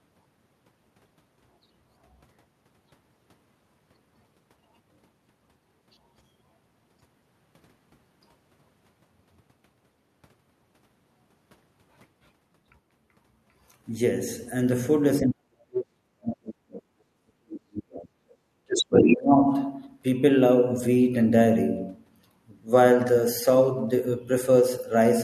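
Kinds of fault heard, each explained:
Speech suppressed in double talk: The speech level falls sharply while the far side is playing on the loudspeaker. From 15.21 to 18.14 s it sinks by about 40 dB, close to silence, for roughly three seconds. A shorter dip follows from 18.89 to 19.47 s, about 20 dB deep. The likely cause is an echo canceller that cannot tell the near talker from the returning far-end signal, so it pulls everything down.
Background gated by the echo canceller: Between 18.42 and 18.61 s the room sound briefly drops by about 10 dB and then comes back. The dip lasts about a fifth of a second. The canceller clamps the microphone hard while the loudspeaker is active. The ambient floor is switched down with it and restored once the canceller releases its hold.
Other side's voice leaking through: From 18.68 to 19.16 s a second voice is heard at roughly the same level as the main speech. 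It lasts about half a second. This is likely loudspeaker playback of the far end reaching the microphone and surviving the echo canceller. It overlaps the start of the second suppression dip, so the leaked voice and the ducking of the talker are heard together.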